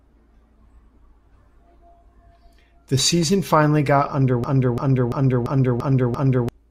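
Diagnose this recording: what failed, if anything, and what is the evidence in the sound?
A system hang loop at the driver or buffer stage: the host froze while the interface kept replaying its ring buffer. Just after "season finally got", from 4.44 to 6.49 s, one 341 ms slice repeats six times at 2.93 Hz, which fits a 16384-sample buffer. The result is a slow machine-gun stutter that replaces about two seconds of speech.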